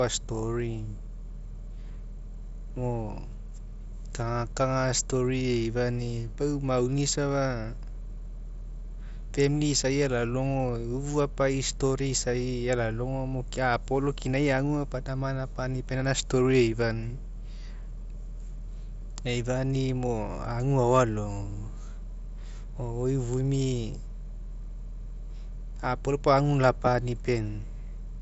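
No technical faults occur anywhere in this speech clip, so there is nothing to describe in time order.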